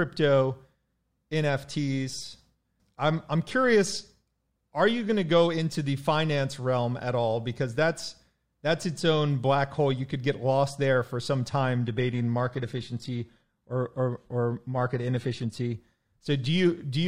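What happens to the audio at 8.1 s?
Nothing goes wrong at 8.1 s; the speech carries straight through that point with no dropout, click or other fault.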